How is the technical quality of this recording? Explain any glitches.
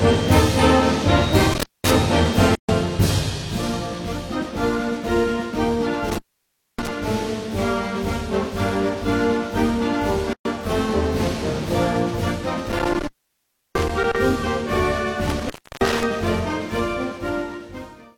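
The recording has two recurring faults that interrupt the audio.

Intermittent contact at 1.53–1.94 s, 6.08–6.89 s, 12.67–14.16 s and 15.27–16.03 s: a loose connection opens for roughly 0.2, 0.6, 0.7 and 0.3 s. Crackle marks each edge, and faint hiss fills the dropout. On a waveform the signal collapses to a thin noise floor between spiky bursts.

Gap at a join of encoded pieces at 2.55 s (134 ms) and 10.33 s (122 ms): separately encoded segments keep their codec start delay and end padding. Each join shows up as a clean silent band with smeared edges, and the audio resumes where it stopped.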